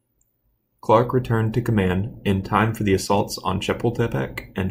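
From about 0.15 s to 4.62 s there are clock slip clicks, faint ticks roughly every tenth of a second, around forty in all. They're likely from two unsynced clocks drifting apart by something like 200 ppm, so a single sample gets dropped or repeated each time.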